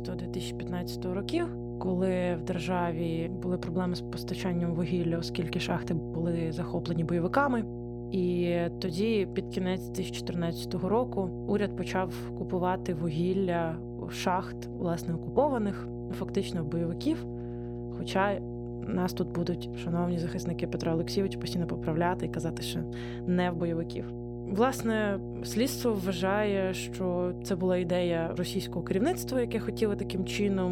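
Speech runs over a steady 60 Hz mains hum that lasts the whole clip. The hum sits close to the level of the speech itself. A ground loop or a nearby transformer is feeding the power line into the signal path.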